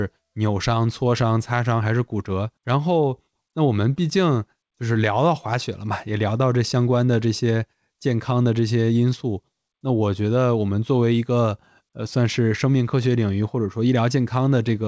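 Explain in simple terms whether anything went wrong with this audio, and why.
Nothing went wrong with the signal: the speech came through an ordinary internet call using the G.722 codec, which keeps sound only up to 8 kHz, so the slightly softened top end is simply how that kind of call sounds rather than a fault.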